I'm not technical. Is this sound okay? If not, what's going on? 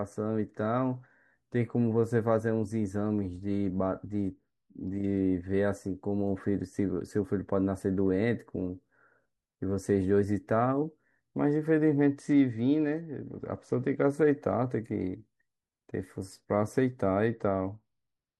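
No. A Bluetooth SBC bit pool drop happens three times: from 4.09 to 5.20 s, from 11.99 to 14.03 s, and from 17.26 s to the end. Each time the wireless link gets crowded and the phone squeezes the speech into fewer bits to keep it flowing. The highest pitches get little or none of their share, so the speech turns dull and muffled, and a gritty roughness creeps in until the connection recovers.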